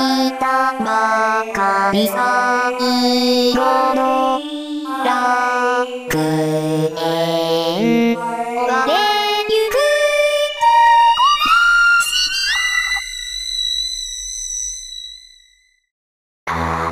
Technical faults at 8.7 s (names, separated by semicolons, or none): none